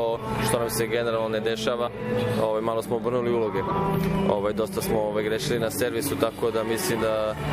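Compressed frames skipped at 1.86 to 1.88 s and again at 3.67 to 3.71 s: whole compressed frames never reach the output, so the audio jumps forward by about 70 ms and then about 50 ms.

Video or display buzz from 5.44 s to the end at 7.52 s: a screen or video cable couples into the audio path, adding a 50 Hz field-rate buzz with hash above it and a thin 15.6 kHz line-rate whine, roughly 25 dB below the signal.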